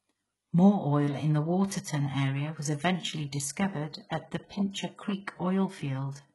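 Throughout, the treble is rebuilt. S sounds turn gritty and metallic. Heavy HE-AAC compression at roughly 12 kbps is the likely cause.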